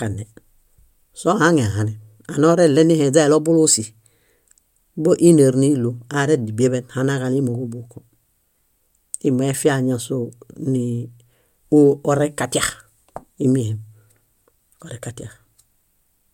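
No technical faults can be heard anywhere in the recording.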